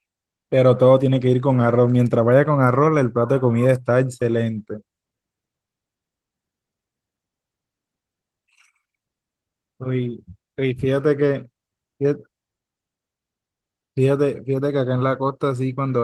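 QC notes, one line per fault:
No faults heard.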